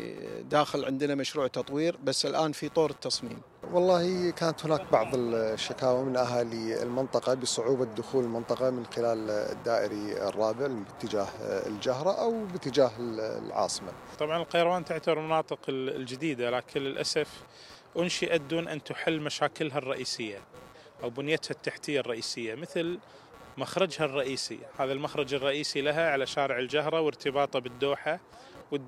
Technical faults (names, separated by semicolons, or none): computer activity noise